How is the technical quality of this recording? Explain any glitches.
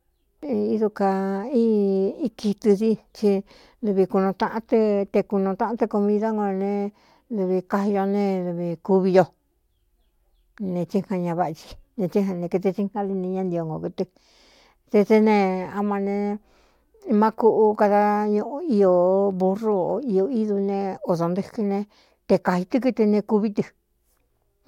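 The recording has no technical faults to report. There are no glitches to explain anywhere in the speech.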